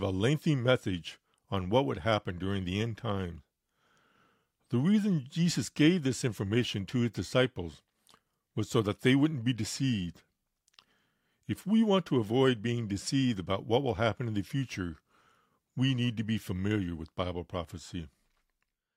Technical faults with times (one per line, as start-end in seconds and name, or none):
none